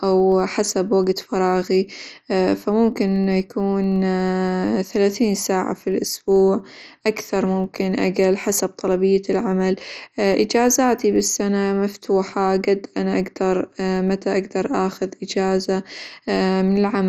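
From start to finish, the speech sounds dull and gurgling. The likely cause is heavy MP2 compression, at a low bitrate near 56 kbps. Throughout, a 25 Hz buzz tracks the speech level. This is a filter restarted on every block, each 40 ms block starting from silence with a tick.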